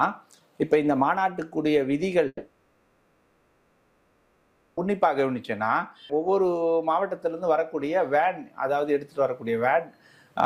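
From 2.27 to 4.79 s the sound smears into a fading buzz, then about 40 ms of silence before resuming with 2.5 s lost, likely a long network dropout.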